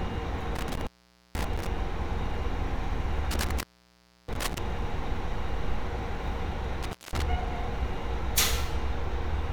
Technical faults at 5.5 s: none

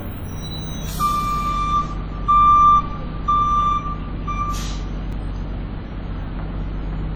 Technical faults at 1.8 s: WMA compression

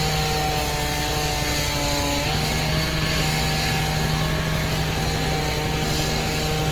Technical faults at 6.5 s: generation loss

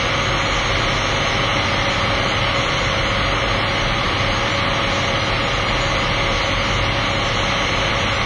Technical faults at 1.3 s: WMA compression

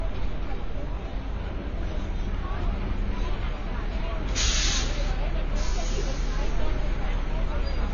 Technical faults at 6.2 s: AAC compression

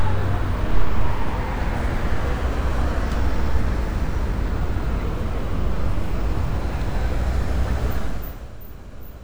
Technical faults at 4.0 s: none

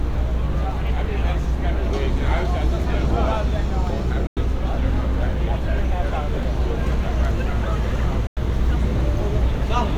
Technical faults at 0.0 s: none

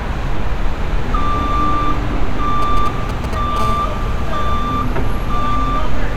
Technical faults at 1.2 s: none

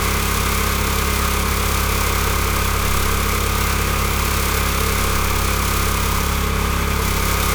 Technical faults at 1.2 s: generation loss

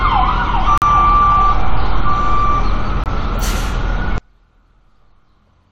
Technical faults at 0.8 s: corrupt frame muted

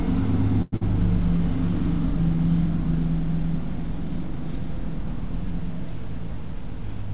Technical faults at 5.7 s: none

